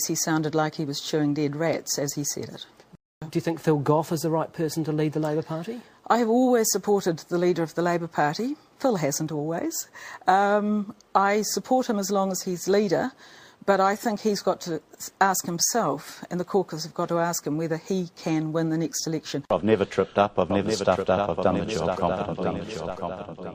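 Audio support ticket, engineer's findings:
No faults found on listening.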